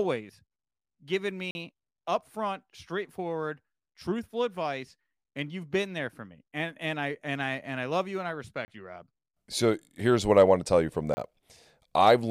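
The output buffer was likely left unfilled three times in this speech clip, leaving a block of digital silence at 1.51 to 1.55 s (40 ms), 8.65 to 8.68 s and 11.14 to 11.17 s (30 ms each). Each hard drop to silence and back is heard as a short hole.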